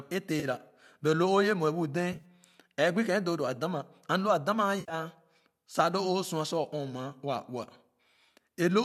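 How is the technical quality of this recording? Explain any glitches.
Three short glitches interrupt the speech, at 0.40 s, 2.13 s and 4.80 s, each a brief smeared patch rather than a clean gap.

AAC frame loss with concealment: at 0.40 s, about 30 ms is lost just before "but lo o yɛ". At 2.13 s, 60 ms is lost in pieces across 100 ms. At 4.80 s, 90 ms is lost across 100 ms, with one run of about 70 ms. Each time the decoder rebuilds the missing audio from the last good spectrum, so the sound turns noisy and phasey instead of dropping to silence or clicking. That smear is what sets it apart from a plain dropout. The longest run at 4.80 s sinks furthest toward silence before the sound recovers. The slight overall roughness likely comes from low-delay AAC coding at around 64 kbps, the codec behind this concealment.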